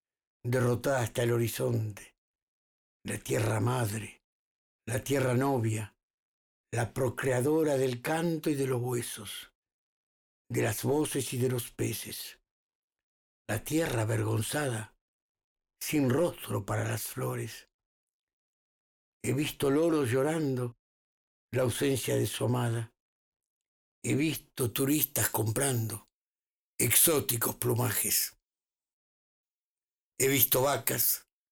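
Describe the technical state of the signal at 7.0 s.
At 7.0 s the signal is intact, with no audible dropout, distortion, or other technical fault.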